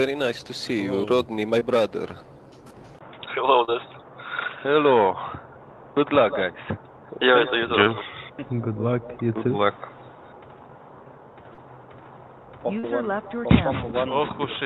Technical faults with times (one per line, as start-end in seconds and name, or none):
1.59-1.63 short concealed packet loss
2.99-14.65 input switched to a poorer device
3.65-3.69 short concealed packet loss
7.83-7.87 short concealed packet loss
11.53-11.59 short concealed packet loss
12.79-12.85 short concealed packet loss